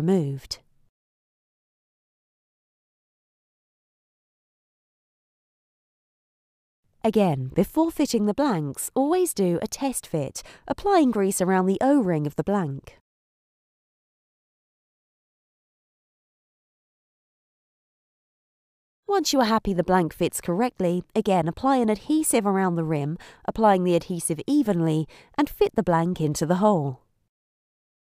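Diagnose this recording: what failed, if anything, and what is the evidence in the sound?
Bluetooth stutter at 7.53 s, a wireless-link fault: a brief repeated slice of about 14.5 ms, which points to a single lost or late packet. The receiver replayed its last buffer until fresh data arrived, then the sound resumed further on, as if it had kept playing.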